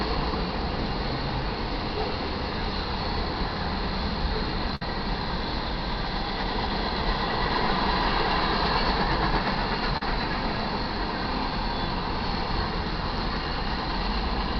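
At 4.75 to 4.82 s the audio breaks with a burst of packet loss. Roughly 50 ms of signal never arrived in time. The receiver filled about 56 ms by stretching the last sound it had and fading it down. That gives a brief held, dying tail. The audio then picks up further along, with the missing stretch skipped. At 9.97 to 10.02 s there is a short concealed packet loss. About 40 ms failed to reach the decoder. The gap was patched with roughly 39 ms of continued sound, then blended back into the real signal. It comes across as a quick smear or wobble in the sound.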